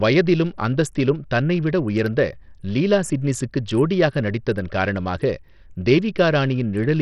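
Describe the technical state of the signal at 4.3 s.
At 4.3 s the speech has likely passed through Bluetooth SBC compression at a starved bit allocation, fitting about 64 kbps. It is heavily damaged throughout, with nothing above 13.1 kHz and gritty, flickering treble.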